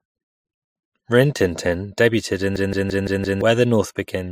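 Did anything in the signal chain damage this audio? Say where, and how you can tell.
Yes. A system hang loop runs from 2.56 to 3.41 s, at the driver or buffer stage. One 0.17 s slice of speech repeats exactly five times, a machine-gun stutter at about 5.9 Hz, which fits an 8192-sample ring buffer. The host or driver stalled while the audio hardware kept replaying the last buffer it held, so roughly a second of real audio never arrived and was replaced by these identical repeats.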